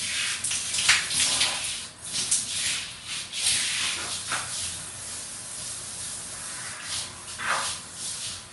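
From start to finish there's a hard ceiling on the top end: nothing comes through above about 11.3 kHz, and the sound has a watery, swirly quality, plainly audible throughout. That's likely MP3 compression, squeezed hard enough to fit a bitrate around 48 kbps. The encoder ran short of bits, so it lopped off the treble and dropped the quieter frequency lines, which flicker in and out between frames. That flickering causes the swirl and leaves sharp onsets smeared.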